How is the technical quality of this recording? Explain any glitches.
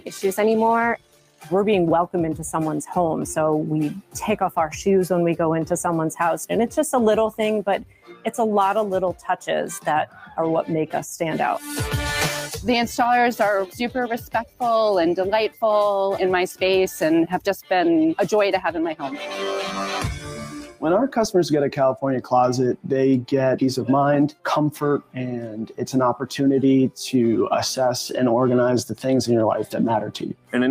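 Quality suffers from a speech-oriented noise suppressor acting on non-speech audio.

Throughout, a noise suppressor applied to music or sounds treats sustained material as noise, so gain swings by around 10 dB. The sound pumps and thins, and the waveform envelope visibly breathes.

Sound cut by the noise suppressor occurs at 0.00–1.51 s (about 17 dB), 4.01–4.16 s (about 17 dB), 7.31–10.38 s (about 15 dB), 13.67–15.63 s (about 13 dB), 20.19–22.91 s (about 18 dB), 24.29–26.97 s (about 17 dB) and 28.09–30.54 s (about 18 dB). Within these spans, held tones and decays sink while attacks survive. A spectrogram shows sustained bands fading to dark gaps after bright onsets.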